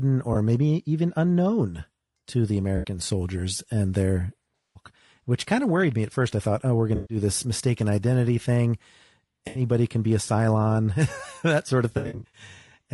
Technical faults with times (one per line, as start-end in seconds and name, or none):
0.00-12.94 low-delay AAC compression
0.33-0.36 AAC frame loss with concealment
2.77-2.87 AAC frame loss with concealment
4.56-4.81 AAC frame loss with concealment
6.95-7.17 AAC frame loss with concealment
9.47-9.61 AAC frame loss with concealment
11.97-12.41 AAC frame loss with concealment